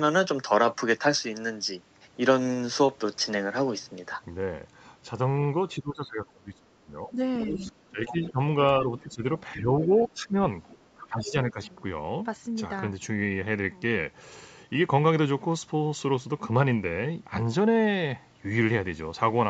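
From 5.77 to 8.39 s the echo canceller likely could not separate the talker from loudspeaker echo while both sides spoke. The result is speech suppressed in double talk, turned down by about 20 dB at its deepest. Within that stretch, at 7.41–7.71 s and 8.06–8.32 s, the other side's voice leaking through is likely residual echo the canceller missed, heard as scraps about 10 to 15 dB under the speech. The same ducking returns at 8.80–9.24, 9.56–10.35 and 10.94–11.59 s, with dips of about 10 to 15 dB. Further faint leaks come at 9.97–10.08 s and 10.64–10.77 s, roughly 20 and 30 dB down.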